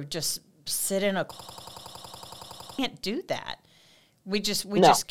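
From 1.39 to 2.79 s, a system hang loop: a stalled driver left the hardware replaying one 93 ms buffer, producing a 10.8 Hz machine-gun stutter.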